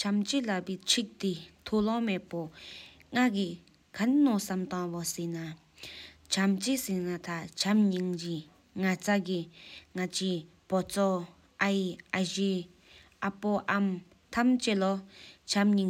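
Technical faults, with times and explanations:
No technical faults detected.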